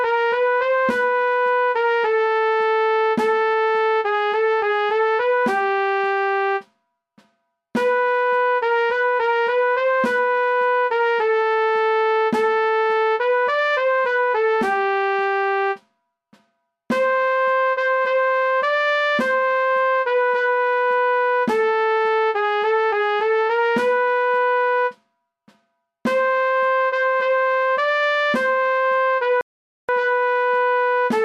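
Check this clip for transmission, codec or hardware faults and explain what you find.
One fault is present: a playback stall from 29.41 to 29.89 s. The sound stops mid-flow for about 0.48 s of silence, then resumes. The likely cause is the player running out of buffered data, or its output thread being blocked, until it recovered.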